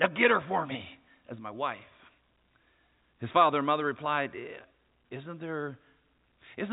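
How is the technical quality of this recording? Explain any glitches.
No glitches can be heard in the recording, which carries the speech as ordinary G.711 telephone coding with nothing above 3.8 kHz.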